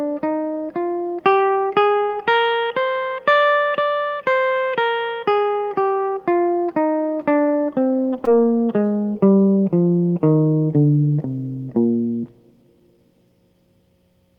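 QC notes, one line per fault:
2.03–2.11 s, burst of packet loss: a run of packets arrived too late or not at all, so the receiver extended the last sound for about 53 ms while fading it. The last sound is held and fades, then the music resumes with about 60 ms missing.
8.25–8.29 s, short concealed packet loss: roughly 20 ms of audio never reached the decoder in time, and the receiver synthesised about 19 ms from the preceding sound before blending back. The music shows a brief smear or wobble.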